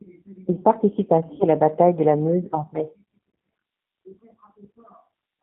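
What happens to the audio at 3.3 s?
VoIP packet loss concealed by the G.729 decoder at 3.30 s, just after "en mai": about 40 ms of audio, likely two 20 ms packets, went missing. The decoder stretched its last pitch and filter with falling gain, leaving a brief buzzy or noisy, fading smear.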